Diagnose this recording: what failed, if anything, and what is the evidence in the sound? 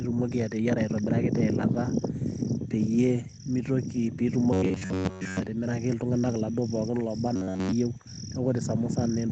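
From 4.53 to 5.48 s, and again from 7.36 to 7.72 s, the speech turns into a rigid metallic buzz pitched at 93.8 Hz that only loosely follows the syllables. This is robotic sound from repeated short buffers, likely a driver or buffer stage starving for input and looping its last block of about 10.7 ms. That loop imposes the fixed 93.8 Hz pitch. Most of the first stretch and all of the second are repeats rather than fresh audio.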